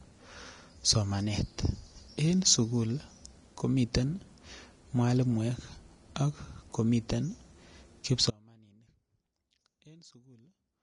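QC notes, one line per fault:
Throughout: Vorbis compression, likely the cause of the hissy, grainy texture on this speech. The top end stops dead with nothing above 10.6 kHz, and the treble that remains has been quantised so coarsely that fine detail turns into noise of similar energy. That roughens the tone and blurs the consonant attacks. The damage is plainly audible, which fits a low bitrate around 34 kbps.
8.31 s to the end: audio dropout to a faint residue. The speech cuts out abruptly rather than pausing or fading, and it never comes back. All that's left for the rest of the clip is a faint sound sitting roughly 30 dB below the signal's normal level. That points to the wanted signal likely being lost upstream while the path after the break stayed live and kept passing that faint sound through.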